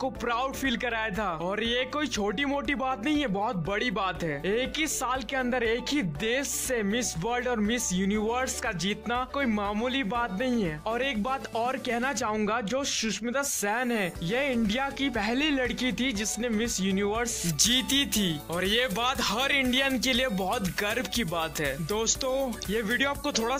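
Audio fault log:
17.49–23.6 s, pre-emphasis left on: from this point to the end the treble jumps up, about 13 dB stronger at 10 kHz than at 1 kHz, and the sound turns thin, bright and hissy-sibilant. The rise follows the 75 µs FM curve: the boost applied before transmission was never undone by the matching de-emphasis. Unlike a bass cut, the low end keeps its level; unlike a fixed treble shelf, the lift keeps climbing steadily above about 2 kHz.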